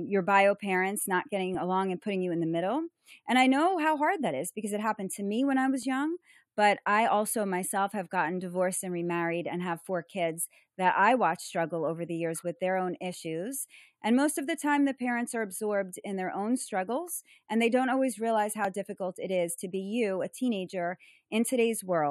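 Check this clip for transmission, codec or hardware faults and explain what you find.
Two faults are present in this speech clip: a constant comb-filter colouring and a series of regularly spaced clicks.

Channel delay (comb filtering) affects the whole clip. One channel lags the other by only a few samples, about a tenth of a millisecond, and summing them to mono cancels shared content at evenly spaced frequencies, the first notch falling near 5 kHz. The result is a hollow, thinned top end. Unlike simple low-pass dullness, the notches are fixed and periodic rather than a smooth roll-off.

Clock drift buffer slips appear as sharp clicks every 4.28 s from 1.55 s to 18.65 s. The likely cause is two devices on independent clocks, mismatched by several hundred parts per million, so a buffer periodically drops or repeats a short block of samples. Unlike packet-loss dropouts, these are brief clicks, not gaps, and they arrive at a strictly steady interval.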